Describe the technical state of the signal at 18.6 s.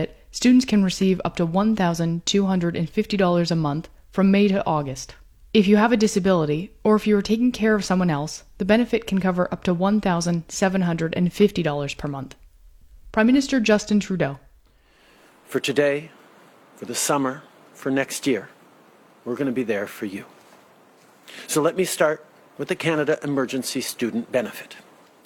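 At 18.6 s the signal is intact, with no audible dropout, distortion or other technical fault at that moment.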